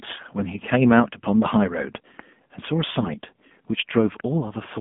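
AMR narrowband mobile codec damage runs through the whole speech clip. The sound is confined to a telephone band of about 150 Hz to 3.5 kHz, with nothing above it. The plainly audible buzzy, synthetic edge fits AMR-NB at a low rate near 7.4 kbps.

A loud pop strikes from 4.20 to 4.22 s, a single sharp click roughly 20 dB above the speech, with the speech continuing underneath. It was likely caused by a sudden voltage step, such as a switch, static discharge or connector glitch, entering the signal path.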